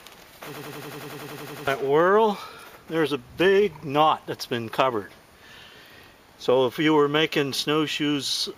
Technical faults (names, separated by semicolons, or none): system hang loop